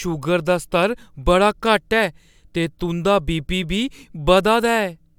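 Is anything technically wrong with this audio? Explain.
No, nothing technically wrong can be heard here.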